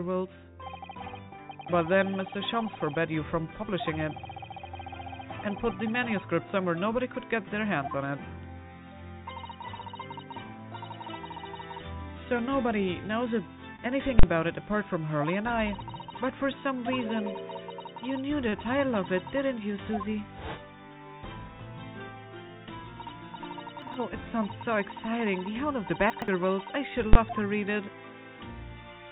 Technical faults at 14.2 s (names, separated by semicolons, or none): invalid numbers at full scale